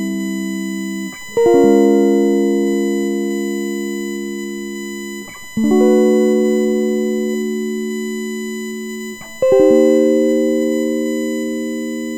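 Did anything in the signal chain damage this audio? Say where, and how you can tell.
Yes. USB whine runs throughout the music, a fixed 1 kHz tone strongest at 2 kHz, roughly 20 dB down: USB frame current leaking through power or ground wiring.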